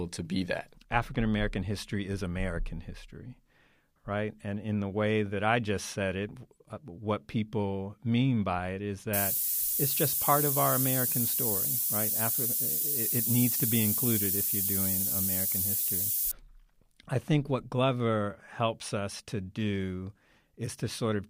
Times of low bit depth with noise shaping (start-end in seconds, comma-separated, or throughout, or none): 9.13-16.31